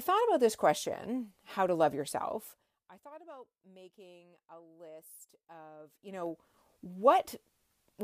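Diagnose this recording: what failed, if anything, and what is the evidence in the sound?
A ticking, zipping texture rides on the speech from 5.78 to 6.55 s as the level shifts by roughly 25 dB. This is zipper noise at the gain-processing stage: the level moves in unsmoothed 2 dB steps, around twenty a second, each step leaving a small click.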